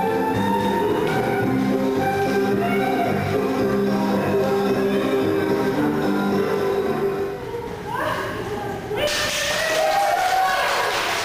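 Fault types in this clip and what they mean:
No faults can be heard.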